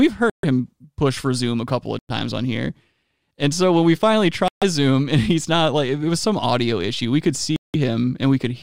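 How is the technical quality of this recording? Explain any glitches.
The speech is interrupted four times by short dropouts, at 0.30–0.45 s, 1.99–2.11 s, 4.48–4.63 s and 7.56–7.76 s, each going fully silent for about 100 to 180 ms before the speech resumes. These are likely Bluetooth stalls: radio interference delays packets, the receiving buffer empties, and playback halts until retransmitted data arrives. The result is an abrupt hole in the audio rather than a crackle or distortion, with the speech continuing after each gap.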